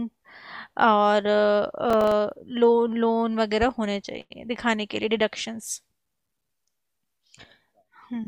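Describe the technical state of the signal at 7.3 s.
At 7.3 s the speech signal is intact, with no audible fault at that moment.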